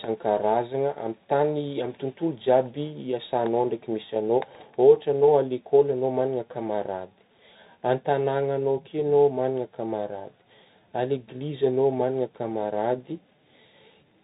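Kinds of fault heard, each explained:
Bluetooth CVSD headset codec: speech is coded as one-bit up/down steps, which fits a 64 kbps link; nothing passes above 3.8 kHz, with plainly audible granular, scratchy distortion.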